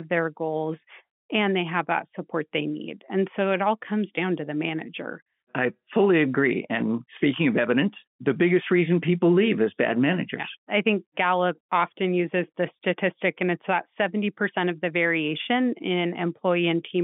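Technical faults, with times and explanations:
No technical faults can be heard in this speech.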